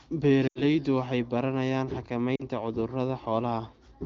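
Speech over an AMR wideband (HD Voice) link briefly smears and fades at 0.47 to 0.62 s, just before "waxay baranayaan", and again at 2.36 to 2.44 s, just after it. These are lost AMR speech frames: the decoder stretched the last good frame with falling gain, roughly 80 ms and 40 ms of missing audio.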